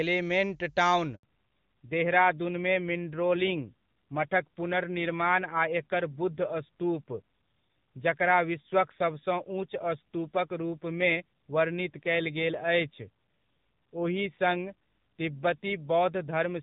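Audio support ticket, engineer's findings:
Handover gap, 1.15 to 1.23 s: sound dies away fast into 80 ms of clean silence, lost during the network switch; unlike packet loss, no concealment buzz, and the bandwidth changes right after.

Fallback to narrowband, 1.23 s to end: nothing above 4 kHz, duller and rougher. Points to a low-rate narrowband codec after the handover. Unlike simple low-pass filtering, it adds roughness and follows the clear HD Voice section before 1.15 s.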